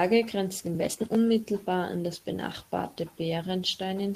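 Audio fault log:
No fault detected anywhere in this speech recording.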